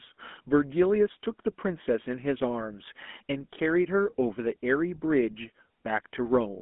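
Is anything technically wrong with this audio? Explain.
Yes. Throughout, the speech has GSM full-rate codec damage, consistent with the 13 kbps coder. A vocal-tract model driven by coarse, regularly spaced pulses gives a plainly buzzy, gravelly roughness. A spectrogram shows energy confined to 200 Hz to 3.5 kHz, with nothing above 3.8 kHz.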